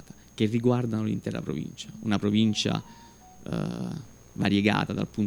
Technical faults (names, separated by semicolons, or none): none